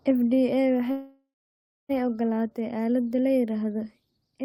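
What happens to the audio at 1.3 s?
The speech stops and its last sound trails on as a fading buzz, then about 0.6 s of silence, from 0.91 to 1.91 s. It resumes where it left off, a second later, with nothing lost. This call audio freeze is likely packets arriving late and emptying the jitter buffer.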